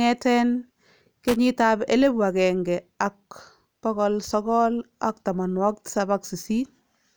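At 1.28 s a short burst of loose connector crackle cuts into the speech, ending by 1.36 s. A worn or dirty contact is making and breaking for about 80 ms. The signal is chopped on and off, heard as a rough, irregular scratch.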